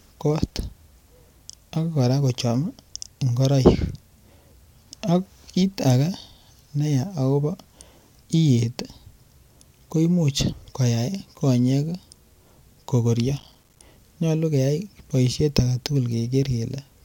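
From 13.39 to 13.87 s, processor overload crackle: dozens of missed buffers of about 5 ms leave tiny silent gaps, a gritty burst unlike one dropout.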